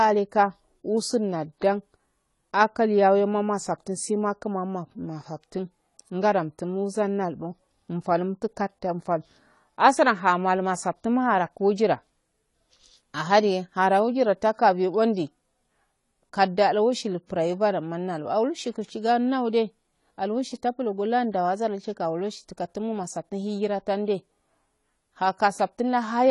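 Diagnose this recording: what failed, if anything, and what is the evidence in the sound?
The codec stage failed: the speech shows AAC compression throughout, with nothing above 11.5 kHz and plainly audible smearing and fizzy warble on sibilants, which fits AAC-LC at about 32 kbps. The likely cause is coarse quantisation of spectral lines, which a simple low-pass would not produce.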